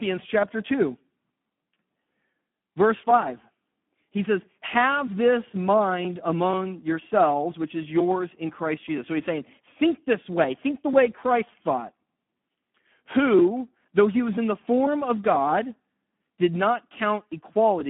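From start to finish the speech carries heavy Speex codec damage: hoarse, buzzy and edging toward robotic, which fits a low setting of around 8 kbps starving the excitation. It sits on a narrow phone-style band of about 150 Hz to 3.4 kHz, with nothing above 3.8 kHz.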